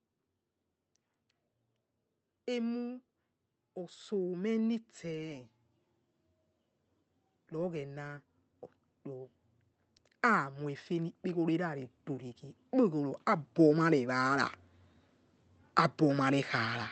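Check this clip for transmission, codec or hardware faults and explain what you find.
The clip has one kind of fault, repeated twice. Automatic gain rising: the gain control judged the input too quiet and pushed its gain up, by about 4 dB from 3.61 to 5.48 s and about 9 dB from 10.21 to 14.52 s, so speech and background swell together.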